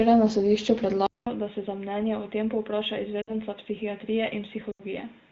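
At 1.06 s, right after "na sodišču", the sound drops out for 200 ms and returns dull and boxy, with nothing above 3.8 kHz, about 10 dB quieter, and with a faint new noise floor well below the signal. This is most likely an input switched to a poorer device, such as another microphone or a headset's call profile. Unlike a filter or codec change, the narrowing arrives together with a gap, a level drop and a different background, and it persists to the end.

Two bursts of lost AMR speech frames follow, at 3.21 to 3.35 s (60 ms lost) and 4.72 to 4.83 s (80 ms lost). These spans fit runs of three and four 20 ms frames. In each, the decoder stretches the last good sound and lets it sag, producing a quick fade to near silence rather than a hard click, and the sound resumes slightly rough. The wideband AMR coding underneath adds only light, even texture, unlike these short local disturbances.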